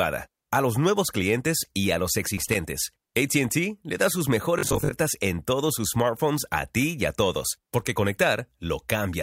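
A worn or dirty contact making and breaking at 2.38 s to 2.56 s, just after "clientes y a los", chops the signal into pops: loose connector crackle, heard as an irregular burst of scratchy crackle over the speech for under a fifth of a second.

From 4.59 s to 4.95 s, between "le da sus" and "en todos sus smartphones", audio likely arrived too seldom, so roughly 20 ms chunks were replayed for about half the stretch, giving robotic sound from repeated short buffers: a rigid, metallic 50 Hz buzz that loosely tracks the speech.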